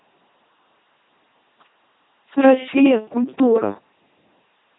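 From start to end the speech goes through an LPC-10 vocoder, heavily damaged: each moment is rebuilt as pure buzz or pure hiss through a simple tract filter, giving a mechanical robot voice, consistent with 2.4 kbit/s. Unlike plain band-limiting, which also cuts everything above 3.8 kHz, the voicing itself is synthetic.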